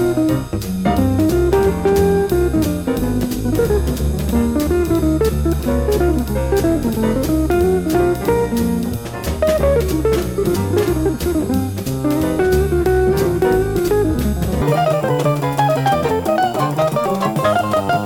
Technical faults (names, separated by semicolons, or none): audio read two samples at a time (double speed)